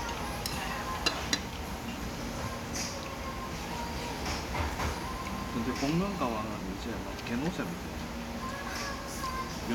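No technical faults can be heard anywhere in this audio.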